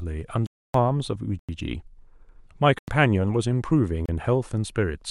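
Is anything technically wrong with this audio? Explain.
Yes. The speech drops into blocks of digital silence at 0.46 to 0.74 s (about 279 ms), 1.39 s and 2.79 s (93 ms each, which fits a 4096-sample buffer), and 4.06 s (30 ms). Output buffers likely went unfilled and were zeroed, so the sound stops and restarts abruptly around short holes.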